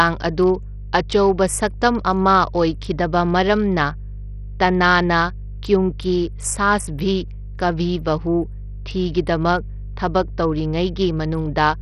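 From the first second to the last there's a steady 50 Hz mains hum sitting under the speech, and it's not subtle: it's fairly loud, only a modest step below the talker. That's the classic ground loop or stray transformer field leaking the power line into the signal path. You hear it as a constant low drone with a bit of buzzy harmonic edge, and it never lets up in the gaps between phrases.

Running the whole way through as well is heavy coding damage that sounds like Bluetooth SBC compression, most likely the cause given how it behaves. Nothing survives above about 13.6 kHz, and the treble that's left is thin and unstable. SBC chops the band into a few wide slices and, when bits are scarce, starves the quieter upper ones and quantises everything else coarsely. The grit and swirly aliasing on the speech point to a low bitrate, around 64 kbps.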